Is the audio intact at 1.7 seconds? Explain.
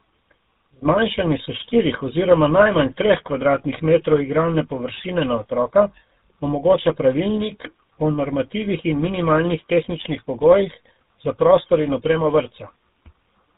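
No. At 1.7 seconds, as across the whole clip, the speech shows tandem speech coding: it passed through GSM full rate, was decoded to G.711 A-law, then was coded again by GSM full rate, so the second GSM coder worked on the first one's already damaged output. That compounding gives a rougher, more muffled, warbly quality than one GSM pass would, with nothing above 3.8 kHz. The stacked roughness, not just the narrow band, sets it apart from a single codec.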